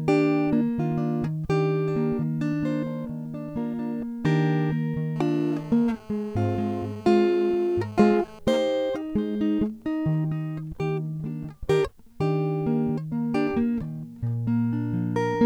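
GSM phone buzz runs from 5.16 to 8.39 s. A nearby 2G phone in a call transmits radio bursts about 217 times a second, and the audio circuitry rectifies them into a hard, raspy 217 Hz buzz with many harmonics. It sits about 22 dB below the music and is unrelated to it.

GSM signalling bursts follow from 8.50 to 10.18 s. Once the phone's user falls silent in the call, it sends only brief groups of bursts, heard as even ticks with a longer buzz twice a second, roughly 30 dB below the music.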